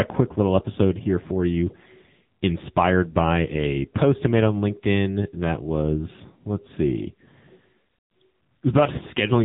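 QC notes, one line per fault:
Throughout, AMR narrowband mobile codec: heavily buzzy, synthetic speech with nothing above 3.8 kHz, which fits a low-bitrate AMR-NB phone-call encoding around 6.7 kbps.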